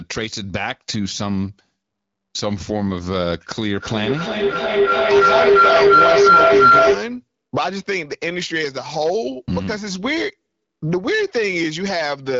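An acoustic loop between a microphone and a loudspeaker in the same room gained level on each pass, producing a feedback howl in this speech recording from 3.7 to 7.2 s. It settles near 1.5 kHz, pulses about every 300 ms, and peaks about 10 dB above the speech. The band, which stops near 7.5 kHz, fits an AMR-WB (HD Voice) call at around 12.65 kbit/s.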